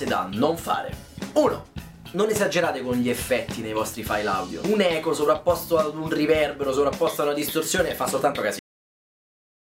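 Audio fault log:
8.59–9.64 s, cut-off end: the final buffers of the recording were never written out or played back, so the signal stops partway through a sound at 8.59 s instead of finishing on its own. Nothing of that sound's natural decay or tail follows; the level falls straight to silence, which runs for roughly the last second of the clip. The abrupt stop, with no fade, is what makes the ending sound truncated rather than complete.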